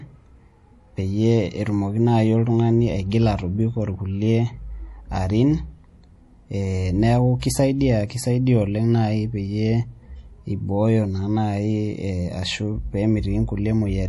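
Throughout the clip, nothing sounds above 11.5 kHz and the speech has a plainly audible watery, swirling texture with smeared consonants, likely MP3 compression at a low bitrate around 48 kbps. The hard treble cut and the flickering detail set it apart from plain low-pass filtering.

From 7.40 to 7.42 s, a pre-echo puts a short hiss about 25 ms ahead of a sharp attack, because the codec's quantisation noise spreads across the whole block before it. Unlike a click or reverb, the noise comes before the onset, not after it.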